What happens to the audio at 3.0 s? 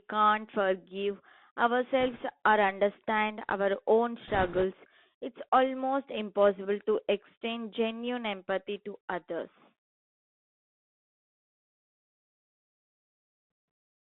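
At 3.0 s the sound is passing through a Bluetooth CVSD headset codec, as it does for the whole clip. The band runs only from about 200 Hz to 3.6 kHz, and the one-bit delta coding, which fits a 64 kbps stream, can't keep pace with loud high content, so sibilants turn scratchy over a granular hiss. A plain telephone band-limit would sound just as narrow, but clean. The grainy slope-overload roughness is what marks CVSD.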